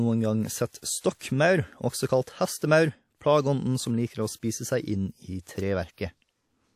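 A transform codec spread each block's quantisation noise back ahead of sharp speech onsets, causing pre-echo at 0.78–0.83 s (48 ms), 1.00–1.04 s (39 ms), 2.23–2.27 s (38 ms) and 5.41–5.47 s (59 ms): a brief hiss leads each attack, which sounds softened and smeared.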